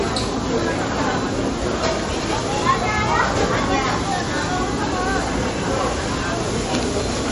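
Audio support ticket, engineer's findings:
Treble gone above 11.1 kHz, whole clip. Watery, swirling texture, plainly audible. Likely MP3 compression at a low bitrate, around 40 kbps. Bit-starved encoder cuts highs at a fixed point and drops weak frequency lines, which flicker frame to frame.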